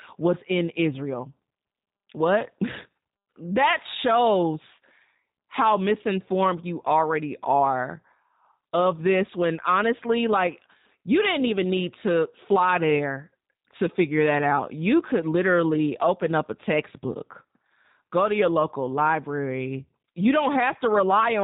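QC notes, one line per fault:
Throughout, G.729 codec: the speech is band-limited with nothing above 4 kHz, and has a plainly audible rough, buzzy, slightly synthetic quality, which fits an 8 kbit/s G.729-family coder. The signal is rebuilt from a vocal tract filter model, a pitch predictor and a handful of pulses per 5 ms subframe rather than from the waveform itself. Fine detail and natural breathiness are lost, leaving the speech intelligible but coarse.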